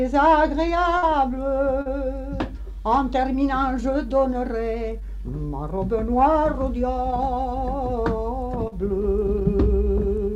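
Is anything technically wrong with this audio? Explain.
Yes, there are two kinds of transmission fault, both from data that failed to arrive in time.

A burst of packet loss runs from 0.97 to 1.04 s. About 60 ms of audio went missing, and the receiver covered roughly 50 ms of it by extending the last sound and fading it down before playback resumed further along. It sounds like a brief held buzz or fading hiss followed by a jump. On a spectrogram the harmonics flatten into static horizontal bands that dim, then cut abruptly to new content. The waveform shows a repeating, decaying pattern.

Short concealed packet loss occurs twice, at 1.82 to 1.87 s and at 8.67 to 8.74 s, each losing about 40 ms. The decoder bridged each gap by continuing the preceding sound, as pitch or shaped noise, and then crossfading back into real audio. This is heard as a quick smear or wobble, and a brief transient can disappear. 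A spectrogram shows a short smoothed patch where detail is blurred. In the waveform, a continued stretch briefly replaces the detail on either side.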